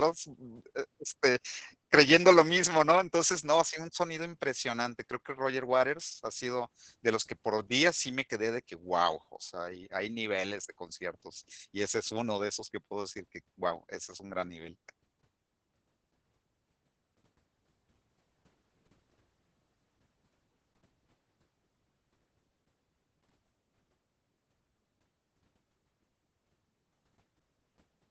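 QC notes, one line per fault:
Throughout: Opus voice compression in SILK wideband mode, nothing above about 8.6 kHz, coarse low-bitrate excitation coding making speech hoarse and slightly robotic, unlike plain low-pass filtering.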